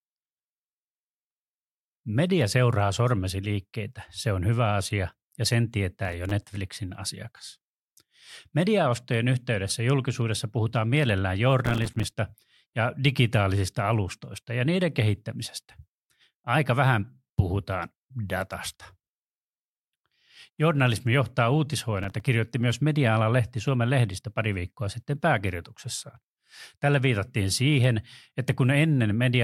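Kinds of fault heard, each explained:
processor overload crackle: the processor repeatedly missed deadlines for buffers of a few milliseconds each, leaving brief silent gaps that crackle through the speech in three bursts.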